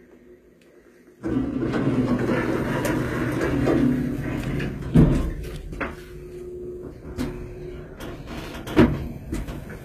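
From start to finish the top octave sounds synthetic. Content stops near 14.8 kHz, and the treble below that is bright but grainy and metallic, with its harmonics not lining up with the body of the sound beneath. The likely cause is HE-AAC compression, at a damage level that fits a bitrate around 20 kbps. The codec codes the lower spectrum and rebuilds the treble by spectral band replication, copying lower bands upward under a coarse envelope.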